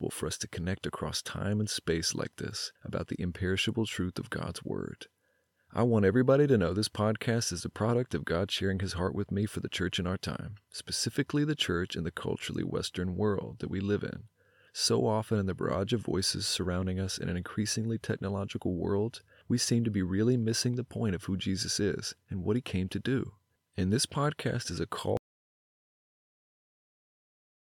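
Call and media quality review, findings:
Audio dropout to silence, 25.17 s to end of clip (about 2.55 s). Input likely lost at capture device or link while recorder kept writing silence. Speech cuts off mid-flow into silence, no room tone; remaining content unrecoverable.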